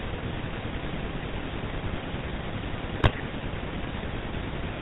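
Throughout, the speech carries the buzzy, gravelly roughness of the GSM full-rate codec, which fits a 13 kbps stream: regular pulse excitation, nothing above 4 kHz. From 3.0 to 3.23 s, GSM bit errors corrupt decoder parameters, bending the spectrum and level frame by frame into squawks, pops and gargling.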